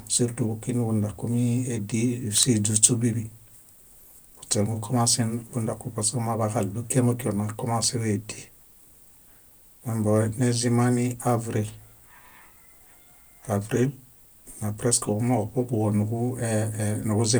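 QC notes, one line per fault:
7.67–8.01 s, CD scratch ticks: three brief ticks, the longest roughly 0.4 ms. A disc blemish destroyed more data on each rotation than error correction could rebuild, so the player interpolated or muted those samples once per turn.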